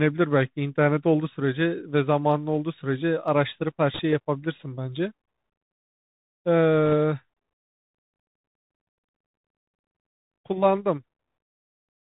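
From start to finish the speech passes through a Bluetooth CVSD headset codec, consistent with a 64 kbps link. Each one-bit sample only nudges the level up or down; nothing above 4 kHz survives, s sounds come out scratchy, and a grainy hiss sits underneath.

At 3.94 to 3.99 s, and again at 6.86 to 6.93 s, bit errors on the Bluetooth voice link add brief bursts of rushing crackle. Flipped bits, around a couple of percent, each die away fast, so the damage is noise, not clicks.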